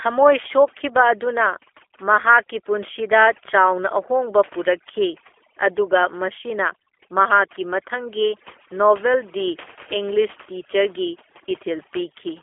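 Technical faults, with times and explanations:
Throughout: overdone noise removal. Background drops and breaks up into twinkling specks, as bands near the noise estimate get cut hard.
Throughout: G.729 codec. Speech sounds plainly rough and synthetic, with nothing above about 3.5 kHz, consistent with an 8 kbit/s G.729A telephone path rebuilding it from pulses.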